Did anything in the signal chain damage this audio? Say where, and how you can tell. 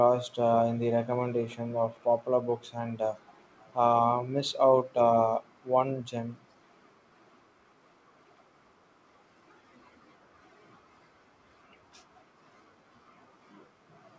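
Yes. Echo leak at the call-processing stage: faint delayed copies at 1.50–1.56, 1.72–2.03 and 3.25–3.74 s, trailing by 425 ms, likely from a far-end echo canceller that missed loudspeaker pickup.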